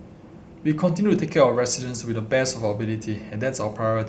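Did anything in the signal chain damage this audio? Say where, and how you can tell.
No, nothing in the signal chain damaged this audio; the call path carried the speech through with the usual coding noise and band limit of a call codec, which here fits a cut-off near 8 kHz.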